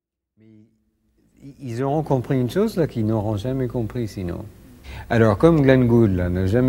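No technical faults can be heard; the level rises in a smooth, deliberate fade from the opening to about 2.15 s with no click or hard edge.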